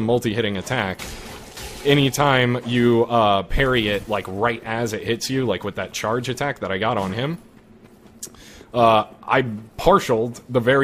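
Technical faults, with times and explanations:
Nothing stood out on listening to the recording.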